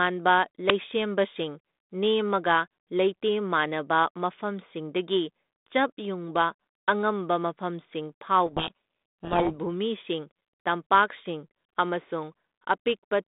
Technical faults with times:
0.70 uninitialised buffer
8.46-9.55 codec payload misread

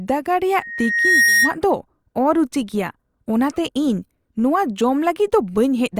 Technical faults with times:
0.60-1.56 loudspeaker feedback squeal

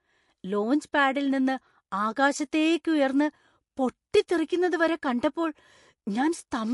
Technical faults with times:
0.00-6.73 MP3 compression

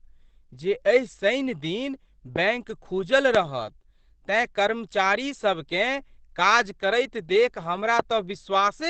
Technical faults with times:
0.00-8.90 Opus compression
2.36-2.38 loud pop
3.35-3.37 loud pop
7.99-8.02 loud pop

